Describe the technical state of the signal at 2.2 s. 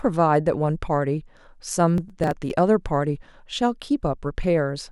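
At 2.2 s the speech is in the middle of a burst of processor overload crackle that runs from about 1.98 to 2.50 s. The processing could not finish its very short audio buffers, on the order of a millisecond or two each, in time, and around ten were skipped outright rather than filled. Each skip leaves a hard-edged gap, and together they sound like gritty tearing over the voice. Unlike a single dropout, this is a dense cluster of tiny breaks.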